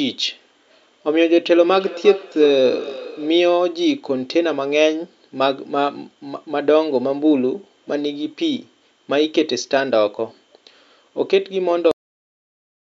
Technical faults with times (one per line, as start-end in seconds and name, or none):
1.65-3.47 feedback echo between two devices
11.91-12.84 cut-off end